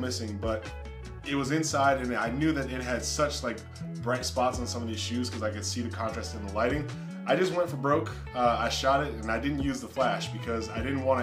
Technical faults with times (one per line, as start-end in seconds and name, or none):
none